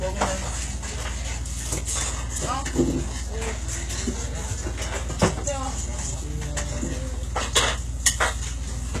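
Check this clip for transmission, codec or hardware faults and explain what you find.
One codec fault runs throughout. The treble sounds synthetic, gritty and metallic, with nothing above 12.3 kHz. This is likely HE-AAC compression, at around 16 kbps, rebuilding the highs from copied lower bands.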